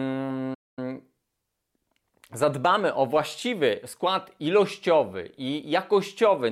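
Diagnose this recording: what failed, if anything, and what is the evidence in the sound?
The speech cuts out abruptly at 0.54 s and stays silent for about 230 ms before resuming at 0.79 s. That gap points to a playback stall at the playback stage, likely the player running dry of buffered data or its audio thread being blocked.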